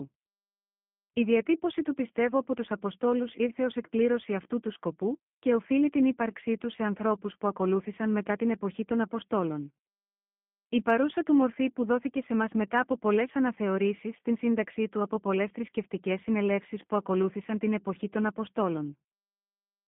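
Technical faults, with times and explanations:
Throughout, G.729 codec: speech rebuilt from a vocal tract model and sparse pulses, fitting an 8 kbit/s link, sounds rough and synthetic, confined to 150 Hz–3.4 kHz, nothing above 3.6 kHz.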